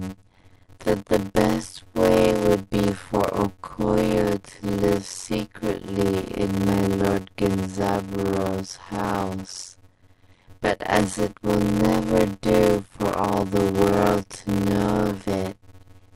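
A block size mismatch (padded) runs throughout: short blocks, fitting 256 samples, are zero-filled, causing a 91.9 Hz buzz and speech slowed to 0.533 times normal speed.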